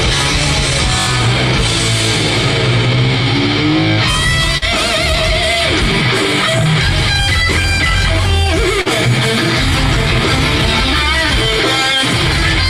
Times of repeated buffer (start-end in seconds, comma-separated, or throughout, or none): 1.00-1.07, 7.62-7.64